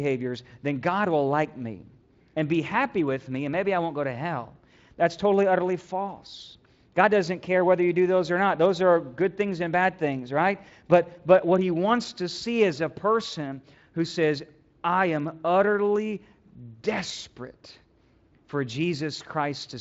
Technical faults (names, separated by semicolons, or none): none